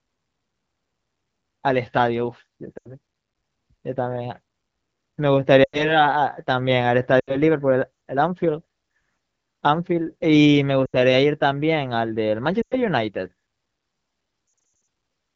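Speech over an HD Voice (AMR-WB) call path, with lost AMR speech frames at 2.77–2.88, 5.63–6.01, 7.20–7.37, 10.85–10.96 and 12.61–12.75 s. Each time, the decoder stretches the last good sound and fades it, roughly 80 to 100 ms of concealment, before the voice comes back thin. A rougher patch at 14.47–14.87 s is several short dropouts scattered over 0.4 s. That's bit errors on the radio link knocking out frames; the light codec texture fits a mid-to-high rate.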